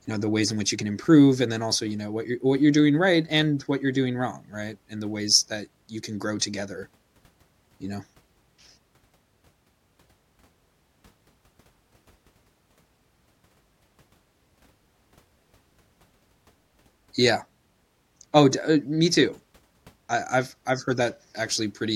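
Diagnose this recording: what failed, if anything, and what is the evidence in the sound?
Looks like a converter problem, sample clock jitter, from about 1.01 s to 5.60 s, between "in which you can" and "you can grow together". A faint hiss rides on the speech, roughly 45 dB down, loudest on bright, loud sounds and gone in pauses. The clock wanders by well under a microsecond, and fast-moving waveforms turn that timing error into noise.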